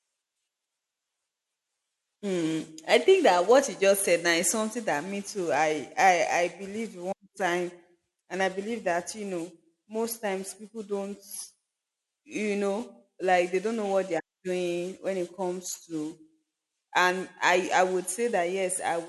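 No audible technical faults.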